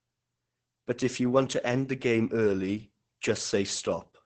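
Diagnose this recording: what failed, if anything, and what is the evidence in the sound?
Throughout the speech the sound is muffled, hoarse and faintly robotic, with nothing above about 8.7 kHz. This is Opus voice compression, and the failure is at the codec stage. The band is cut to wideband, and the buzzy texture points to the SILK linear-prediction coder running alone at a very low bitrate, around 10 kbps. At that rate it has too few bits to model the excitation finely, so the coding damage is heavy across the whole clip.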